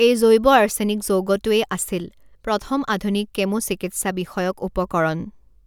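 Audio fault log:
Nothing to log here, as the speech comes through without a single fault to flag.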